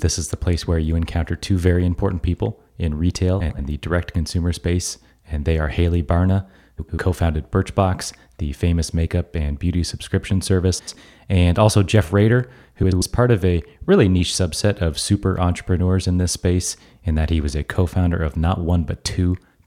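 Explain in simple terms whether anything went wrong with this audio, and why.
Four short stretches of the speech, at 3.40–3.59 s, 6.78–6.98 s, 10.78–10.98 s and 12.83–13.02 s, have frames out of order: two neighbouring chunks of about 93 ms each play swapped, giving a brief garbled flutter.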